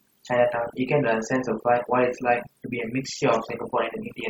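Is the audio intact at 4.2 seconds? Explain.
No. At 4.2 seconds, as throughout the clip, overdone noise removal is at work: a noise reduction stage set far too hard is cutting individual frequency bands whenever they sit near its noise estimate. The background drops and breaks up into twinkling specks.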